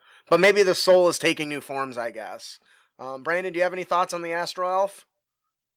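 From 0.31 to 0.62 s the speech takes on a harsh, crackling edge at its peaks. This is microphone overload, likely from input gain driving the converter about 8 dB past full scale so a small share of samples are flattened. At 0.45 s the level drops by about 2 dB in one step. This is a microphone volume step-down, likely the call software trimming input gain after the clipping. Overload returns from 0.88 to 1.31 s, about 5 dB over, just before "new forms I guess". At 1.44 s the level steps down by a further 5 dB or so.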